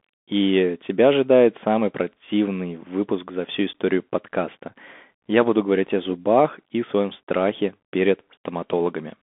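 Bluetooth CVSD headset codec, throughout the speech: one-bit delta coding with an adapting step, which fits a 64 kbps headset link, squeezes the sound into roughly 250 Hz to 3.5 kHz with nothing above 3.8 kHz, leaving granular hiss, scratchy s sounds, and plainly audible distortion.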